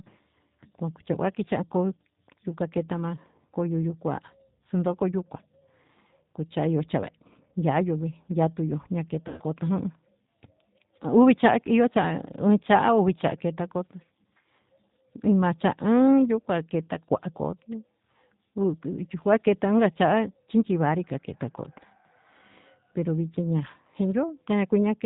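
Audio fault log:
throughout: G.729 codec. The speech is cut off above 4 kHz and sounds rough and slightly synthetic. The decoder rebuilds each 10 ms frame from a vocal tract filter, a pitch predictor and a few pulses. The damage is plainly audible, which fits an 8 kbit/s stream.
9.28 to 9.43 s: VoIP packet loss concealed by the speech codec. About 90 ms of audio goes missing, which fits three lost packets. The decoder stretches the last pitch and filter into a buzzy tone or coloured noise that fades. The voice stays weak briefly after the gap.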